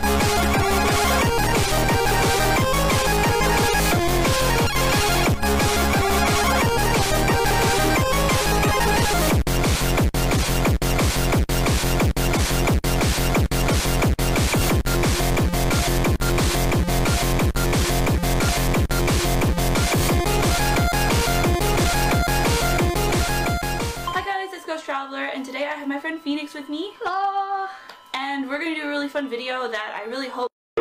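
No faults detected; nothing in the audio points to a problem in the capture or transmission chain.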